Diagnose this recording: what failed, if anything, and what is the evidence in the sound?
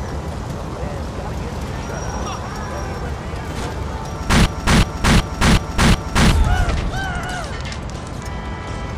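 A system hang loop at the driver or buffer stage: from 4.46 to 6.32 s one 0.37 s slice repeats exactly five times. That is a 2.69 Hz loop, which fits a frozen 16384-sample ring buffer. Bit-exact repeats, unlike smeared network concealment, identify it. About two seconds are lost.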